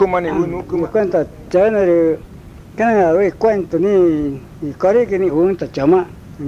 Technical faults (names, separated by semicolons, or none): none